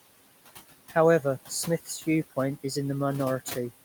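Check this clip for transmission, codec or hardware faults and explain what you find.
One fault is present, and it runs through the whole clip: noise suppressor artifacts. The room noise, sitting about 15 dB below the speech, sinks away in the gaps and rises again under each phrase, so the background pumps in step with the talking. A suppressor is judging which frequency bands hold steady noise and pulling them down frame by frame, by about 16 dB here. It lets the noise back through whenever speech fills those bands.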